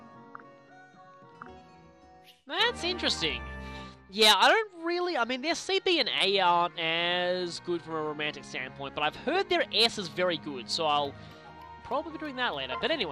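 From start to finish the sound is dulled and carries a gurgling, granular grit. This points to MP2 compression as the likely cause. MPEG Layer II divides the audio into 32 equal sub-bands and shares out bits among them. Here the bits run short, so upper bands drop out and flicker on and off. The bands that remain are coarsely quantised. The damage is plainly audible, and its character fits a rate of about 80 kbps.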